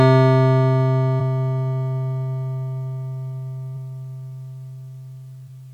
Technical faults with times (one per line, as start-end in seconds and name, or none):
1.16 compressed frames skipped
3.72 compressed frames skipped
5.44-5.49 compressed frames skipped